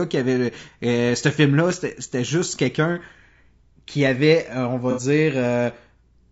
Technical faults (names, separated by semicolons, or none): low-delay AAC compression; AAC frame loss with concealment